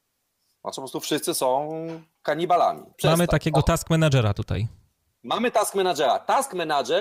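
No technical fault can be heard anywhere in the recording, and the signal carries through its whole duration without any audible disturbance.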